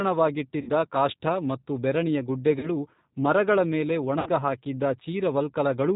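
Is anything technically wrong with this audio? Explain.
Yes. The speech carries two faults.

G.729 codec, throughout: the audio has been squeezed through an 8 kbit/s G.729 speech coder. It discards the signal and resynthesises it from a vocal-tract filter, a pitch predictor and a handful of pulses per 10 ms frame, and passes nothing above 4 kHz. The damage is plainly audible. The speech sounds band-limited, slightly rough and synthetic, with an artificial texture in place of natural detail.

VoIP packet loss concealed by the speech codec, at 0.61 to 0.71 s, 2.59 to 2.70 s and 4.19 to 4.29 s: audio went missing for about 60 ms, 40 ms and 70 ms respectively. With nothing to decode, the decoder repeated its last pitch and filter settings at falling gain, so each gap is smeared into a fading buzz or coloured noise. Because every frame builds on the previous one, the disturbance runs on past the lost stretch, leaving the speech weak or distorted for tens of milliseconds or more each time.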